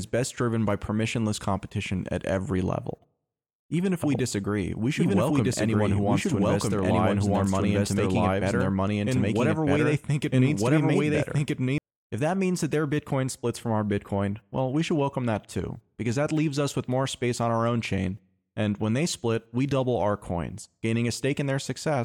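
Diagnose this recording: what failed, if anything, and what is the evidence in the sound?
A doubled audio track runs from 4.02 s to 11.78 s: a second, full-band copy of the speech trails the original by about a second and a half at roughly equal loudness, then stops abruptly. Unlike an acoustic echo or a call-path echo, it has no decay, no room colouring and no level drop. That points to the routing or edit stage, likely a second, slower capture path, or two out-of-step copies in an edit.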